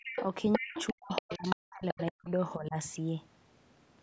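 A short speech recording from a call, band-limited by the call's microphone processing so nothing reaches above 8 kHz. The other side's voice leaking through is heard at 0.04–0.25 s, 0.52–0.93 s, 1.09–1.56 s and 1.88–2.12 s. It is likely loudspeaker echo the canceller failed to remove. The first three bursts sit only about 5 dB below the talker and the last is fainter, about 15 dB down. A spectrogram shows a second, unrelated harmonic pattern overlaid on the main one. Speech suppressed in double talk also occurs from 0.58 to 2.3 s and again at 2.56–2.77 s, where the canceller likely ducked everything while both sides spoke. The talker's level dips by around 40 dB in the longer stretch, affecting roughly 1.5 s in total, and by about 15 dB in the brief later one. The waveform shows the envelope collapsing, and the spectrogram shows chunks of the talker's energy fading out.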